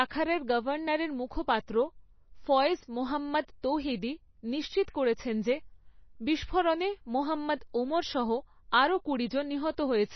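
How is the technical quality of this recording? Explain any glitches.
The quality is poor. MP3 compression damage is plainly audible through the whole speech clip. Nothing above 6 kHz remains, so the sound is dull and muffled. The likely cause is an MP3 encode at a very low bitrate, around 24 kbps. With so few bits, the encoder cuts the treble at a fixed point. It also drops quiet frequency components, which flicker in and out between frames. That gives a watery, swirly texture. S sounds turn metallic and chirpy, and consonant attacks smear.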